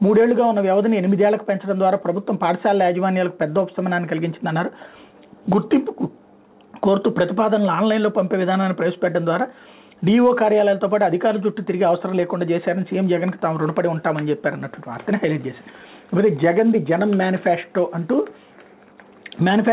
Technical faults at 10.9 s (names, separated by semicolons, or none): none